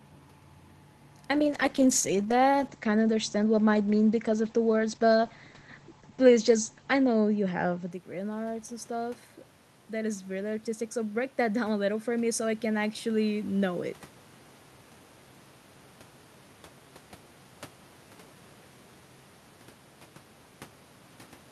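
A speech recording in which, from 1.34 s to 7.97 s, the sound turns rough, watery and muffled, losing its top end before clearing just ahead of "in arts and stuff". This is a call bitrate drop: the bandwidth estimate fell and the encoder went from 64 kbps down to 11 kbps, holding the lowest rate for about 5.8 s. At that rate Opus coded more coarsely and narrowed the audio band from 20 kHz to 8 kHz. After "in arts and stuff", from 9.91 s to 13.88 s, the voice and the room noise swell up together over several seconds. This is automatic gain rising. The voice had dropped at the microphone by about 11 dB when the talker moved back around 8 s, and the gain control responded by gradually raising its gain by about 5 dB.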